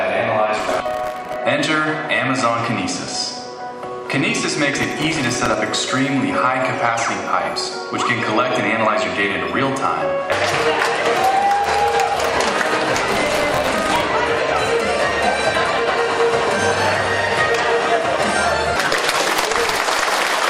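Processor overload crackle appears three times: 0.59 to 1.36 s, 4.78 to 5.54 s, and 13.11 to 14.02 s. In each burst the processing misses dozens of buffer deadlines over the stretch, roughly a hundred in the last one. The buffers are very short, well under a millisecond. Each miss repeats a scrap of old audio with hard edges, and the rapid string of these produces a gritty, tearing crackle over the sound that stops once the load eases.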